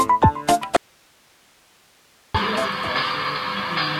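From 0.77 to 2.34 s, an audio dropout to a faint residue: an abrupt cut, not a fade, leaving only hiss well below the signal, likely from a lost input.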